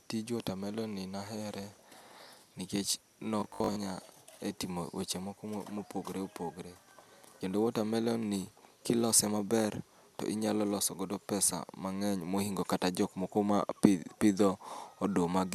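From 3.40 to 3.78 s, robotic sound from repeated short buffers: a rigid 50 Hz buzz, likely from a 20 ms block looped while about half the audio went missing. A spectrogram shows evenly spaced 50 Hz harmonic stripes, and the waveform shows identical repeating 20 ms cycles.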